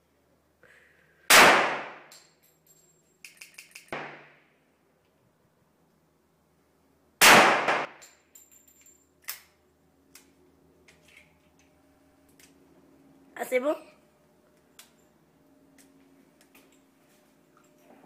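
At 3.41 s a repeated buffer fault begins. The same 0.17 s piece of sound plays three extra times, running to 3.93 s. New audio did not reach the playback device in time, so it replayed its last block. That block length fits an 8192-sample buffer. The fault returns at 5.46 s and 7.68 s with one extra play each, and at 11.95 s with two, ending at 12.29 s. Each is a stutter with hard joins. About half a second of sound goes missing at the first.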